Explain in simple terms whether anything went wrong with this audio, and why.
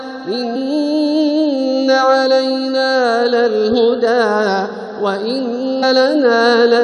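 Something did go wrong: compressed frames were skipped. The player never got, or threw away as damaged, a few blocks of the compressed file, and simply carried on with the next good block. At 0.55 s the sound jumps ahead by roughly a tenth of a second, and at 5.82 s by roughly three tenths of a second. Both jumps fit whole steps of about 23 ms blocks.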